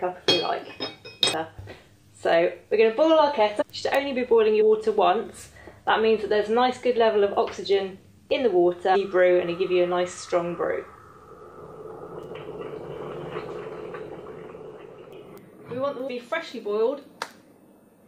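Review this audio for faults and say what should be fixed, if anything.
Damaged data in a compressed stream causes five brief disruptions, about 20 ms each, at 3.60–3.63, 4.60–4.62, 8.94–8.96, 13.49–13.51 and 16.07–16.09 s. Corrupt frames there are misread, and the decoder loses sync. Re-source the file from an intact copy and verify transfers with checksums.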